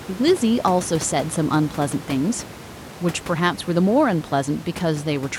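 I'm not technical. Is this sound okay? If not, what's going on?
Yes, nothing is wrong with the playback, and the quiet background noise is just the room the speech was recorded in, sitting well beneath the speech.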